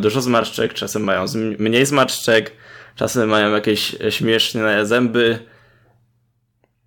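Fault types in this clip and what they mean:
Hard clipping: Speech peaks exceed a stage's limit by about 2 to 5 dB. Their tops are cut flat. Four stretches crackle on peaks.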